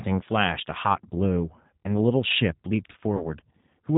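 Throughout, the G.729 codec is plainly audible. The speech is rebuilt from a vocal tract filter and sparse pulses, which fits an 8 kbit/s stream. It sounds rough and faintly synthetic, and a spectrogram shows nothing above 4 kHz, with smeared, grainy harmonics.

From 3.17 to 3.28 s, VoIP packet loss is concealed by the speech codec. About 30 ms of audio went missing, pointing to a single lost packet. The decoder extended its last pitch and filter with falling gain, so a brief, fading stretch of synthetic sound replaces the speech. Recovery then lags, because each frame depends on the one before. A spectrogram shows frozen, flattened harmonics there, and the waveform shows a repetitive, decaying envelope.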